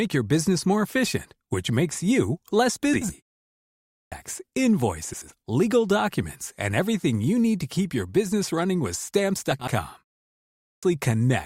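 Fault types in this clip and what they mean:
frames out of order: A brief garbled flutter at 2.93 s, just after "which makes you less", and at 5.13 s and 9.51 s. Two adjoining runs of about 80 ms each arrived swapped and were decoded in that order.
clipped start after a pause: Speech bursts in abruptly without its first sounds at 3.56 s and 10.28 s, with about 0.56 s and 0.55 s lost after pauses of 0.42 s and 0.32 s. The output device had gone idle in silence and needed time to wake.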